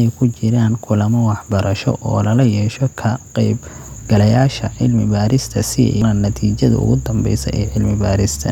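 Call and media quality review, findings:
Damaged data in compressed stream at 6.02 s: brief glitch where the decoder misreads corrupt frame bytes and resyncs. A decoding glitch, not the smeared repeat of a network dropout.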